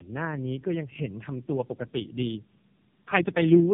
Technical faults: tandem speech coding

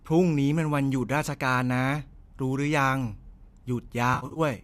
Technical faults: AAC frame loss with concealment

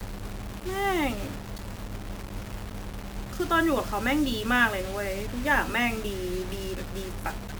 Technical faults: low bit depth without dither

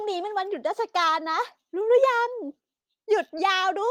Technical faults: repeated stalls (stutter)

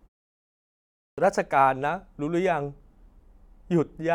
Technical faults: clipped start after a pause

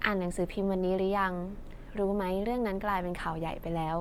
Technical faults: Bluetooth LC3 compression

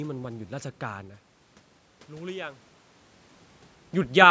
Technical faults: none

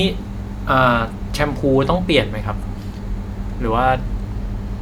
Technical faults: none

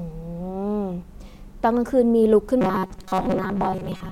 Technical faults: robotic sound from repeated short buffers

